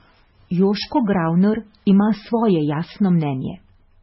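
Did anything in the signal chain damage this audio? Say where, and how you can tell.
Yes. The whole clip sounds watery and swirly, and nothing is heard above 5.6 kHz. The likely cause is heavy MP3 compression at the codec stage. The encoder was starved of bits, which fits a bitrate near 16 kbps. So it cut the treble and dropped weak detail.

Hard clipping appears from 0.62 to 1.44 s and from 1.89 to 2.48 s. The speech peaks there crackle. A gain or converter stage was driven about 2 dB past its limit. The peaks were cut flat, adding high harmonics.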